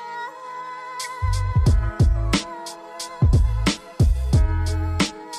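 There's a short blip at about 1.03 s, a classic corrupt frame decoded. The decoder played back a compressed frame with flipped bits, so misread codes threw energy into the wrong frequencies for roughly a single frame, peaking at around -20 dBFS.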